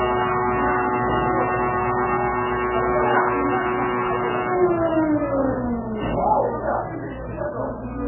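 A recording of everyday sounds runs its full length with nothing above about 2.9 kHz and a watery, swirling texture, pointing to heavy MP3 compression as the likely cause. With so few bits to spend, which fits a bitrate around 8 kbps, the encoder discards the treble at a fixed cut-off and zeroes weaker frequency lines. Those lines flicker on and off between frames, producing the swirl, while sharp attacks smear into a dull, muffled result.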